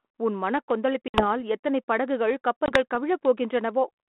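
Packet loss on an ADPCM call breaks this telephone-band speech at 1.08–1.26 s (60 ms) and 2.66–2.77 s (20 ms). Silent gaps are followed by slightly distorted sound until the decoder's predictor resynchronises.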